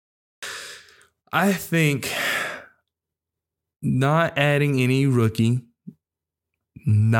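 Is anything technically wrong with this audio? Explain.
Yes. The clip has a cut-off start: capture began late, so about the first 0.43 s is digital silence and the speech then switches on abruptly at 0.43 s, already partway through a sound, with no natural onset or fade-in and a hard edge at the cut.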